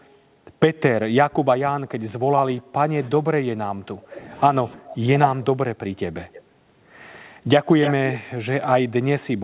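From 1.26 to 4.32 s, then again at 4.75 to 5.07 s and 5.35 to 5.79 s, the voice sinks by roughly 20 to 25 dB and breaks up. That's speech suppressed in double talk, likely the echo canceller mistaking both talkers for loudspeaker echo and ducking everything. At 6.24 to 6.43 s and again at 7.81 to 7.93 s, a copy of the voice trails about 305 ms behind. The first is about 25 dB down, and the second is nearly as loud as the speech, at about 5 dB below. That's an echo leak, likely a speakerphone's canceller letting its own pickup slip back through.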